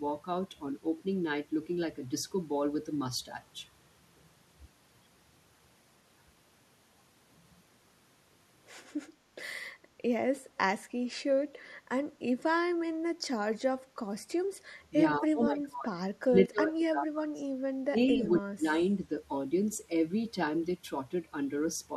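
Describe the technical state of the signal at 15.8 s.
At 15.8 s the speech is inside a stretch of speech suppressed in double talk running from 15.17 to 15.95 s. The level dips, bottoming out roughly 25 dB down. On the waveform the envelope drops. The likely cause is an echo canceller that, with both sides talking, mistook this talker for loudspeaker echo and attenuated both.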